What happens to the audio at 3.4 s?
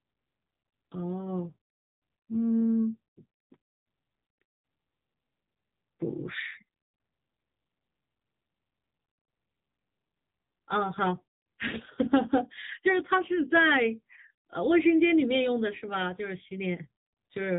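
At 3.4 s the speech is still passing through the AMR narrowband mobile codec, which runs the whole clip. Nothing above 3.8 kHz survives. A few pulses drive a vocal-tract model, so the voice sounds buzzy and synthetic, which fits a low rate near 8 kbps.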